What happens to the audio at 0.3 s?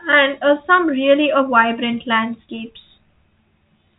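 Nothing goes wrong at 0.3 s: the speech passes intact through the G.726 ADPCM path there, with no dropout, glitch or added distortion at that moment.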